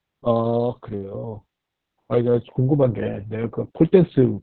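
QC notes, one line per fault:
Throughout: Opus voice compression. The speech is band-limited, with nothing above 4.4 kHz, so it sounds muffled, hoarse and faintly robotic. The excitation is coarsely coded in SILK narrowband mode, and the heavy damage fits a bitrate near 6 kbps.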